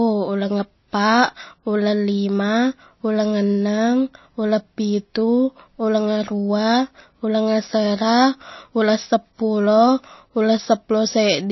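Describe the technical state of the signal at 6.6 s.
At 6.6 s the speech carries plainly audible MP3 compression, present throughout the clip. Nothing is heard above about 5.8 kHz, so s sounds lose their edge. The damage fits a low bitrate of roughly 25 kbps. Short of bits, the encoder has likely cut the treble at a fixed point and dropped weak frequency lines. Those lines flicker between frames. The result sounds watery and swirly, with smeared onsets.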